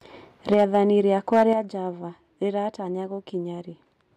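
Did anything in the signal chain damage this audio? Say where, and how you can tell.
Yes. Between 0.52 and 0.76 s, and again from 1.32 to 1.44 s, the loudest syllables turn harsh and crackly, the likely result of microphone overload. Peaks drive about 4 dB past the converter's ceiling and get their tops sheared off, more heavily in the second burst.

Right after clipped peaks, at 0.54 s and 1.53 s, level and background drop together in one step, by about 4 dB and then about 7 dB. That points to a microphone volume stepped down, likely by the call software reacting to the clipping.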